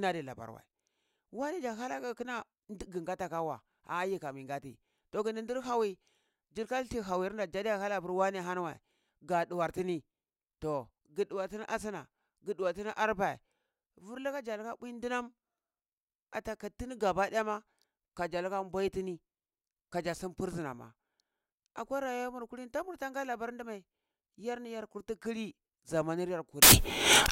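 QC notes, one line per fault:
26.62–27.31 s, samples built from the wrong bytes: right at the tail the speech collapses into loud, harsh broadband noise. Each sample's bytes get stitched together wrongly, so the jittery low bits end up as the big part of the value.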